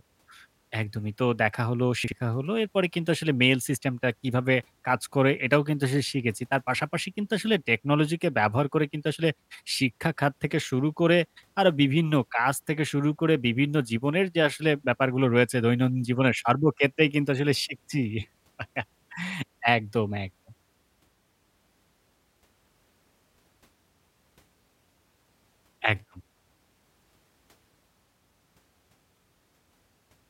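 At 2.04 s the speech jumbles for a moment, and again at 22.08 s. Both are chunks out of order. Each spans 80 ms, ending at 2.12 s and 22.16 s. A 40 ms chunk arrived one slot late and played after the chunk that should follow it. Nothing is missing. The order is wrong, and the hard joins give a short garbled moment.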